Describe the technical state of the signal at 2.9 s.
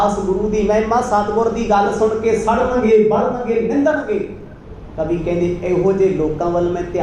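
At 2.9 s the signal is intact, with no dropout, clipping, glitch or other fault present at that point.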